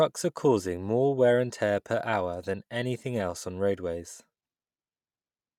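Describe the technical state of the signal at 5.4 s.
Bluetooth LC3 compression is the likely cause at 5.4 s, as throughout the clip: 10 ms transform frames discard the upper spectrum and refill it with noise, giving the speech a plainly grainy, breathy edge that fits roughly 48 kbps.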